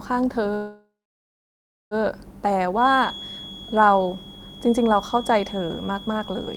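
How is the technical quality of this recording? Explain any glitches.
The recording has two clear technical faults: a stall early on and a tonal whistle through the second half.

From 0.55 to 1.94 s there is a call audio freeze. The sound stops moving forward and the last fragment is stretched into a short fading buzz, then about 1.0 s of silence. This is likely a jitter buffer running dry while packets were delayed in transit. When they arrive, the speech resumes exactly where it stopped, so nothing is lost, but everything after is pushed about 1.36 s later.

From 2.73 s to the end there is a feedback whistle, a thin, steady tone at 3.3 kHz sitting around 15 dB below the speech and swelling and fading slowly in level. It likely comes from a loudspeaker-to-microphone loop held just short of runaway feedback, so that single frequency keeps ringing without building up. It persists under all the speech in that stretch.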